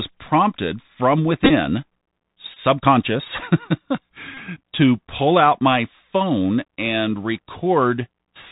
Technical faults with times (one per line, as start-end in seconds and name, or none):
0.00-8.51 Bluetooth CVSD headset codec
1.44-1.50 Bluetooth headset packet repeated
2.54-2.59 Bluetooth headset packet repeated
4.35-4.39 Bluetooth headset packet repeated